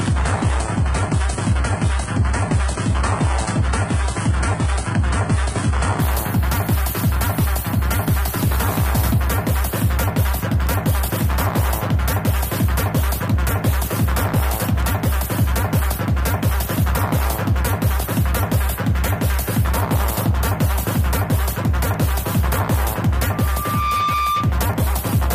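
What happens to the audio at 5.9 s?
At 5.9 s the player is still in an adaptive stream starting at a low bitrate. It began on a cheap low-bitrate version to start quickly and holds it from 0 to 6.0 s. Nothing is heard above 11 kHz and codec artefacts are stronger, which fits a low-rate HE-AAC stream, until quality jumps cleanly at 6.0 s.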